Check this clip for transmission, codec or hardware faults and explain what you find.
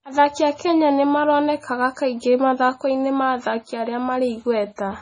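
One codec fault runs through the whole recording. Throughout, the speech has likely passed through heavy MP3 compression: short of bits, the encoder cut everything above 9.9 kHz and dropped weak frequency lines frame by frame, which fits a bitrate near 24 kbps. The result sounds dull, watery and swirly, with chirpy, smeared s sounds.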